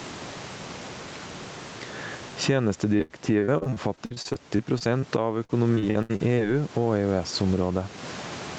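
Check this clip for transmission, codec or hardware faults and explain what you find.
Two faults stand out: gain pumping across the whole speech clip, and two bursts of repeated packet loss that make the speech sound robotic.

Gain pumping runs from start to finish. The level seems to swing by around 20 dB. The likely cause is input gain set far too high, with a fast limiter clamping every loud syllable. On a waveform the envelope looks flattened, with raised noise floors between phrases. A spectrogram shows the background band brightening in gaps and dimming under speech.

Repeated packet loss (robotic sound) occurs from 2.97 to 5.04 s and again from 5.44 to 6.39 s. The first stretch has 18 gaps, about 23% of it concealed, and the longest gap is 79 ms. The second has 7 gaps, about 28% concealed, and the longest is 71 ms. Each gap is filled by stretching the preceding sound, so the speech turns choppy. 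A spectrogram shows smeared, repeated harmonic slices and abrupt vertical seams, and the waveform shows flattened, periodic patches.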